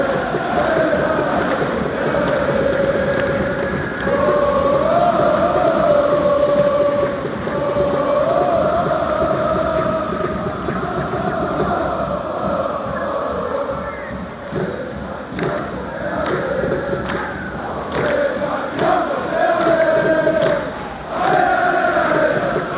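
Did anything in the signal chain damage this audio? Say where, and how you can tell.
No, nothing in the chain damaged it; the content stops at 4 kHz, as expected from a 64 kbps G.711 mu-law call path.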